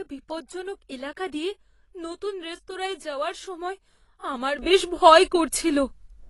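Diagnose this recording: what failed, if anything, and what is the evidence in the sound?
AAC compression runs throughout the speech: nothing sounds above 11.6 kHz, and the damage is plainly audible as dull, smeared detail. This is the codec stage, likely AAC-LC at a low bitrate around 32 kbps, where coarse quantisation and a lowered cut-off strip high-frequency content.

A sudden gain jump comes at 4.59 s, right after "রেস্তোরাঁয় যাওয়ার সময় আমার", and holds to the end: speech and background noise rise together by about 12 dB. The likely cause is a processing stage applying a digital gain step in a single sample, without a ramp.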